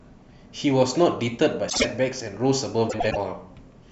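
Speech, marred twice by frames out of order. At 1.69–1.85 s two adjacent 52.2 ms blocks play swapped, and at 2.89–3.17 s two 104.5 ms blocks do the same, each block fitting two or four frames of roughly 26 ms. Each stretch sounds like a garbled flutter, though no time is lost. A spectrogram would show formant tracks jumping abruptly at the joins, and the waveform would show sharp discontinuities there.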